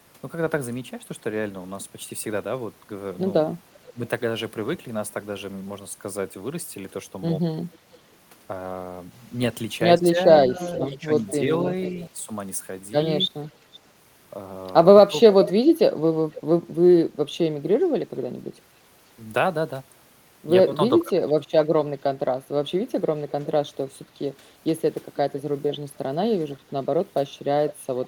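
At 3.87 to 3.92 s, an echo canceller on a far-end loudspeaker likely let its pickup through. This echo leak puts a faint copy of the speech, roughly 25 dB down, about half a second late (487 ms). From 3.91 to 3.99 s, the canceller likely could not separate both talkers at once, causing speech suppressed in double talk: the voice dips by around 15 dB for a brief moment.

From 7.72 to 16.41 s, a stronger echo leak, likely from the same incomplete cancellation, trails the speech by 492 ms at about 15 dB below it. Within that stretch, from 10.41 to 13.65 s, double-talk suppression likely pulls the talker down in scattered pieces totalling under half a second, dipping up to roughly 10 dB.

From 21.03 to 24.43 s, double-talk suppression likely strikes harder, chopping the voice by as much as around 25 dB in fragments adding up to under half a second. From 23.29 s to the end, an echo leak likely returns, a faint copy roughly 25 dB down, 499 ms behind.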